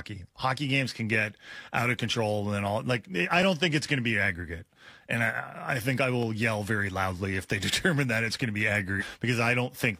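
Near the end of the speech, at about 8.97 to 9.03 s, compressed frames get skipped: the decoder loses or rejects a run of them, so the audio leaps ahead around 300 ms, which fits roughly seven 46.4 ms frames. You hear the speech jump abruptly forward at that point.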